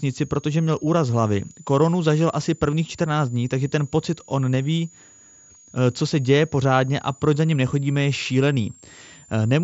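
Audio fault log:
throughout — switching supply whistle: a switching power supply in the chain is cycling in an audible burst mode, or beating against another supply, and its ripple leaks into the signal path. The result is a thin, high whistle, roughly 30 dB below the speech, wandering between about 6.5 kHz and 7.5 kHz and centred near 7 kHz as the supply's load shifts. That band sits just under the 8 kHz ceiling of the mSBC headset link, so the whistle passes through.
2.71 s — concealed Bluetooth headset packet loss: right after "zažil asi", voice data between headset and phone failed to arrive. The gap is about 15 ms, which fits a couple of lost frames. The receiver filled it by repeating the best-matching slice of the most recent waveform rather than leaving silence.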